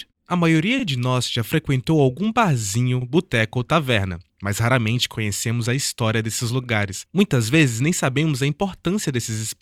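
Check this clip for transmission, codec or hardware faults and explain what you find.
Repeated frames, three times: at 0.79 s just before "de nós já frequentou", at 3.01 s after "já frequentou algum barzinho", and at 6.63 s after "conhecemos a história desses". Each time, a 40 ms block of compressed frames gets played twice, so you hear a quick stutter that adds 40 ms.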